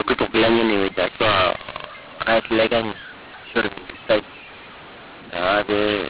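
Harsh, gritty distortion runs through the whole speech clip, with loud and quiet passages jumbled in level and the gaps between phrases filled with a hiss where there should be near-silence, all within a narrow band topping out around 4 kHz, which fits an 8 kHz telephone stream. This is mu-law and A-law mixed up: the audio was encoded with G.711 mu-law but decoded as A-law, so each 8-bit code maps to the wrong level and the quietest samples jump well above silence.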